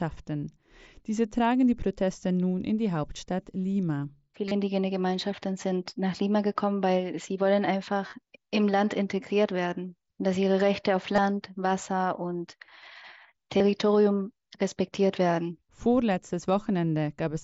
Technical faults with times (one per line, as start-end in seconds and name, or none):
4.48-4.51 concealed Bluetooth headset packet loss
8.07-8.15 concealed Bluetooth headset packet loss
11.16-11.18 concealed Bluetooth headset packet loss
13.57-13.60 concealed Bluetooth headset packet loss